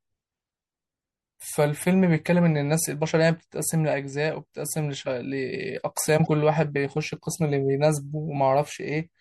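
From start to end, the speech sounds watery and swirly, with a dulled top. This is most likely MP3 compression, plainly audible, and fits a low bitrate around 64 kbps. From 6.23 to 6.27 s, damaged data in a compressed stream produces a brief glitch. The decoder misreads corrupted frames, loses sync, and searches for the next frame header.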